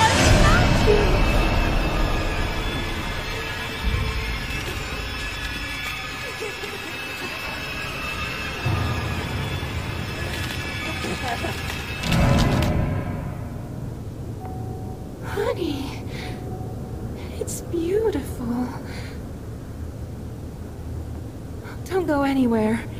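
From start to finish a grainy, gritty distortion clings to the sound and shifts with it, roughening quieter passages and leaving the faintest moments to sputter or drop out rather than fade smoothly. The noise sits only around 30 dB below the signal. This is likely low bit depth without dither: the audio appears truncated to about 8 bits with no added dither, so the rounding error tracks the waveform instead of becoming a steady, neutral hiss.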